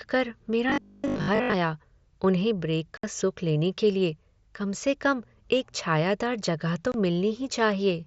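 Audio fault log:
0.70–1.54 s, robotic sound from repeated short buffers: the sound takes on a rigid, metallic 50 Hz buzz that still roughly tracks the speech. Most of the real audio in this span is skipped, and a short snippet of about 20 ms is likely replayed over and over, fixing the pitch at one over its length. Unlike dropouts, there are no gaps.
2.97–3.04 s and 6.92–6.94 s, unconcealed Bluetooth headset packet loss: abrupt holes of 60 ms between "उन्हें ब्रेक" and "सुख लेने", and 22.5 ms just after "एक छायादार जगह तो". Their lengths fit runs of 7.5 ms mSBC frames, about eight and three. The missing audio is simply absent, with hard edges rather than a buzz. The wideband mSBC link stays audible around each hole.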